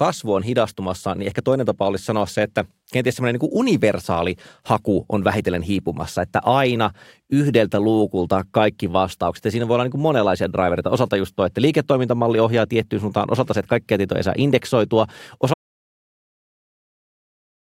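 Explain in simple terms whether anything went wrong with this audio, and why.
Yes, something went wrong near the end. At 15.54 s, right after "tietoja ei saa indeksoitua", the speech drops into dead silence and stays there to the finish. That's an audio dropout to silence, likely from the input cutting out while recording kept going.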